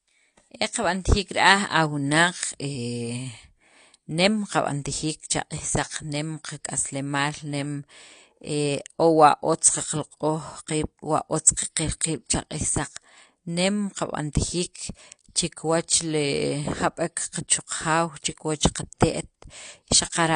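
Speech throughout carries plainly audible AAC compression damage: dull, smeared and fizzy on sibilants. That is likely AAC-LC encoding, and the plainly audible damage fits a low bitrate around 32 kbps. A spectrogram shows a hard ceiling, with nothing above 10 kHz for the whole clip.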